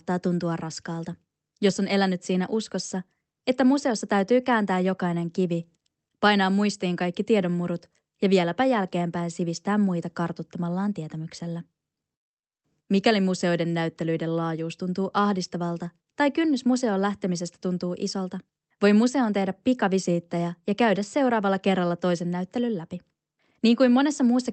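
The speech carries no technical faults, and its passage through the call path shows a top end limited to about 8 kHz, which fits Opus running near 24 kbps.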